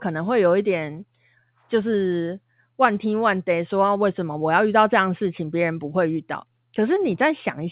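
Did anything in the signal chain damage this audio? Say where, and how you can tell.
No, nothing in the chain has damaged this speech. It has passed through a call path that leaves nothing above 4 kHz, which fits a narrowband telephone codec such as G.711 mu-law, and that band limit is simply how that path sounds.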